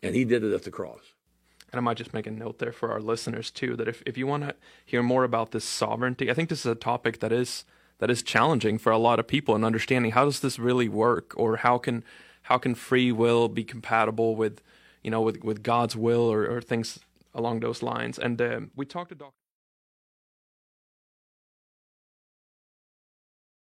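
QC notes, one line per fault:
No faults found.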